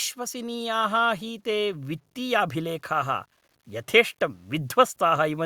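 From the first moment to the end, a gritty, grainy distortion rides on the speech and changes with it, sitting roughly 45 dB below the signal. This is low bit depth without dither, likely truncation to about 10 bits. The spectrogram shows signal-shaped broadband hash, and quiet waveform passages look stair-stepped.

From 0.15 s to 5.41 s, automatic gain rising lifts voice and background together by 10 dB. The gain control judged the input too quiet and raised it gradually, so the waveform envelope swells steadily and the spectrogram brightens across all bands.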